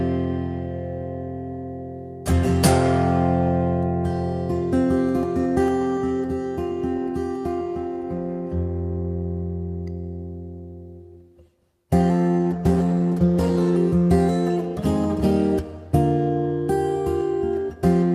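At 12.38 s the call's bandwidth estimate fell and the encoder was told to cut its bitrate from 48 kbps to 18 kbps, a call bitrate drop. It stayed at that lowest rate for about 1.4 s, so during that stretch the sound is coded far more coarsely, with fewer bits for detail, and turns rough, watery or muffled. The bitrate recovers by 13.87 s, and the sound clears again from there.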